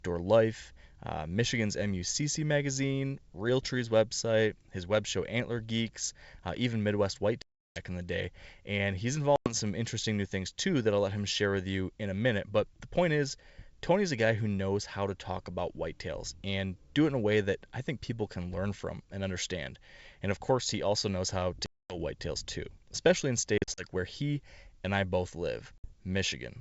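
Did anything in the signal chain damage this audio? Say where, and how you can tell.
Yes, at the network stage. This is packet loss on an ADPCM call, with hard-edged holes at 7.42 s (340 ms), 9.36 s (100 ms), 21.66 s (240 ms), 23.58 s (120 ms scattered over 200 ms, longest run 40 ms) and 25.78 s (60 ms). The gaps are filled with silence. The decoder's predictor and step size drift away from the sender's, so speech returns slightly distorted, then settles after a few tens of milliseconds.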